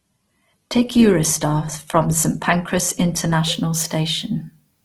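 Adaptive stream starting at a low bitrate, 0 to 3.35 s: the player began on a cheaper encoding, with nothing above 12.1 kHz, then switched seamlessly to fuller speech.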